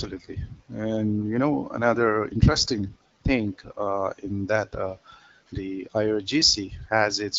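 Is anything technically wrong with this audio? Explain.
No, nothing here is technically wrong; the speech comes across the way you'd expect from an AMR wideband (HD Voice) call at 12.65 kbit/s, with the light coding character that rate brings.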